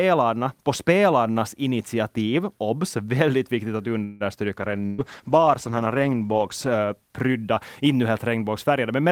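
At 4.03 s, just after "väldigt viktigt att", a call audio freeze runs to 4.23 s. The last sound is drawn out as a fading buzz for about 166 ms, likely because delayed packets emptied the jitter buffer. It then resumes where it stopped, so nothing is missing but everything after arrives 166 ms later. A waveform shows a smooth decaying tail instead of a break.

From 4.60 s a call bitrate drop sets in, from 48 to 14 kbps, holding at the lowest rate for about 1.8 s and recovering by 8.04 s. The coarser encoding makes the speech rough and muffled. On a spectrogram the upper bands thin out and are cut off, leaving smeared, blocky energy below.

Inside that stretch, at 4.86 to 5.01 s, a burst of packet loss removes about 120 ms of audio. The receiver fills roughly 122 ms by repeating the last sound as a dimming buzz or hiss, then jumps ahead. The spectrogram shows flat, repeated bands fading out, followed by an abrupt onset.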